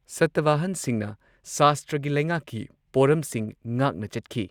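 From the start to about 1.77 s, the speech carries a fine hiss and roughness that swells on loud and bright sounds and drops away in pauses. This is sample clock jitter: a converter clock wandering by under a microsecond, leaving errors roughly 45 dB below the signal.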